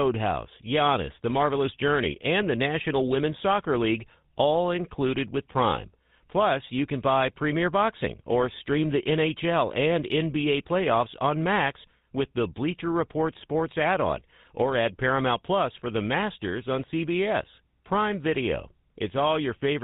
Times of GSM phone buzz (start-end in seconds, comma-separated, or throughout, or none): none